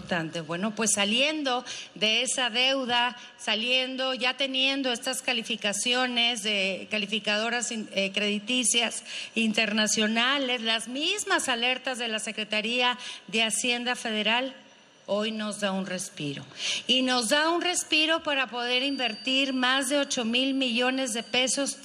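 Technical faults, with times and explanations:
18.57 to 21.84 s, feedback whistle. A thin tone at one pitch near 4.6 kHz sits about 20 dB below the sound, swelling and fading slowly, until the clip ends. The likely cause is a loudspeaker-to-microphone loop held at the edge of feedback, sustaining one frequency without building up.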